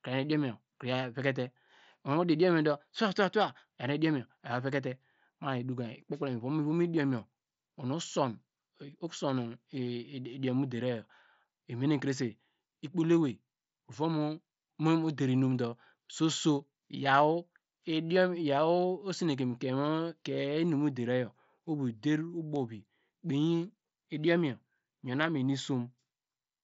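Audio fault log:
Nothing to log here: the speech comes through a Bluetooth mSBC headset link running at about 61 kbps, with the top end stopping around 7.7 kHz as that wideband codec does.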